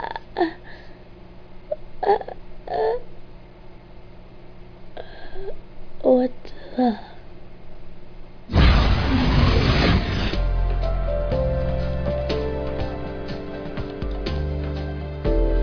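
No technical faults can be heard anywhere in it.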